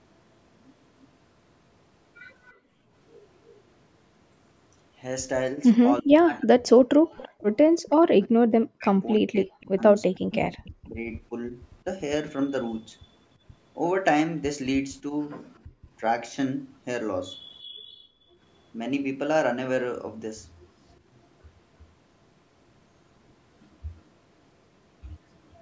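From 1.02 to 10.71 s a faint delayed copy of the speech trails about 340 ms behind, roughly 25 dB down. This echo leak is likely a loudspeaker echo the far end's canceller failed to remove. From 2.53 to 2.92 s the background is gated by the echo canceller: room sound drops by about 31 dB while the loudspeaker plays, then returns. From 6.02 to 11.85 s the speech is suppressed in double talk, dipping and cutting out in pieces by up to around 40 dB over roughly 2 s in total. The likely cause is the canceller attenuating the local talker while both sides speak. Within that stretch, from 7.04 to 7.15 s, the background gates out again by about 32 dB. A longer gating follows from 15.67 to 18.4 s, with the room sound dropping by about 24 dB for roughly a second in total. Throughout, the call microphone processing limits the band to nothing above 8 kHz.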